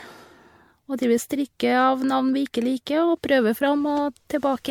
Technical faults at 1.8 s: generation loss

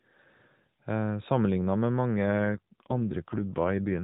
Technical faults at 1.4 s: none

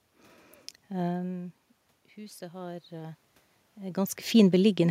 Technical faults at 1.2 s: none

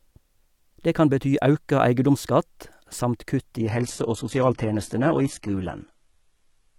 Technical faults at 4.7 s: adaptive stream at a lower bitrate

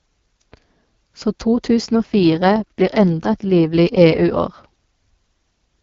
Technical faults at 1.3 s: none

